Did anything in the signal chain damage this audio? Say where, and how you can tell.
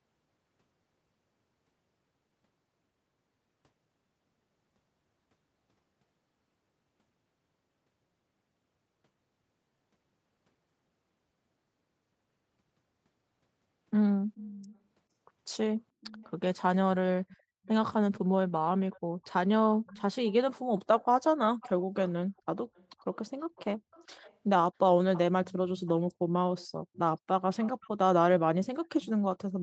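Yes. The damage points to call processing, likely an echo leak from a far end on loudspeaker whose echo canceller let its microphone pickup return. A faint delayed copy of the speech trails the original by about 0.44 to 0.45 s. It appears at 14.35–14.75, 16.01–16.31 and 17.29–17.69 s. It then runs from 18.93 to 27.89 s, and again from 28.85 s to the end. It sits about 15 to 30 dB below the direct speech.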